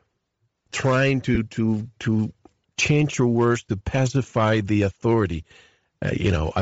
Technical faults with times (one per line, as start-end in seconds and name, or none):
0.00-6.62 Bluetooth LC3 compression
1.35-1.38 lost LE Audio frames